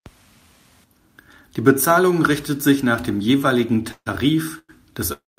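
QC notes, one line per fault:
3.91–4.08 s, call audio freeze: the last sound is held as a fading buzz for about 150 ms, ending in roughly 60 ms of silence. Audio then resumes exactly where it stopped, with nothing lost, just later. This is likely from late packets draining the jitter buffer. A spectrogram shows smeared, repeating horizontal bands that fade to a blank strip, and the waveform shows a decaying loop, then flatline.
4.59–4.71 s, call audio freeze: a shorter stall of about 100 ms. The held sound decays into about 50 ms of silence, and playback then picks up with no content missing, pushing everything after it a further 100 ms late. This is likely a jitter buffer underrun. The spectrogram shows a brief stretched band and a narrow gap, and the waveform shows a small repeating decay and a dropout.
5.13–5.39 s, call audio freeze: the longest stall, about 250 ms, running to the end of the clip. 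The concealment buzz fades within about 70 ms and leaves about 180 ms of silence, so the delay grows by a further 250 ms or so, to about 500 ms in all. This is likely packets arriving too late for the jitter buffer. The spectrogram shows a fading smear followed by a clear empty block, and the waveform drops to a flat line through the final fifth of a second.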